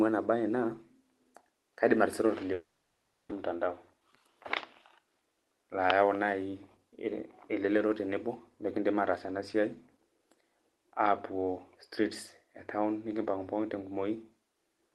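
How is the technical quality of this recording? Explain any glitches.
The recording has three network glitches in its first six seconds, heard through a call path whose Opus codec cuts the highs above about 12 kHz.

From 2.53 to 3.33 s, just after "kaidim atisira", the sound smears into a fading buzz and then goes silent. This is likely a long network dropout: about 600 ms of audio was never received and is skipped. Its length and the silence that follows set it apart from a brief packet-loss blip.

From 3.51 to 4.36 s (109% speed) and 4.98 to 5.53 s (113% speed), the audio sounds hurried while the pitch stays unchanged. This is a jitter buffer speed-up. The receiver trimmed roughly 70 ms of pitch periods in each stretch to cut built-up delay, unlike resampling, which would also raise the pitch.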